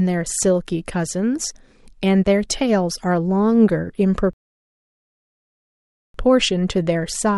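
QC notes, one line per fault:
4.33–6.14 s, rebuffering stall: the speech drops to silence for 1.8 s, then resumes exactly where it stopped. Playback ran out of downloaded audio and waited.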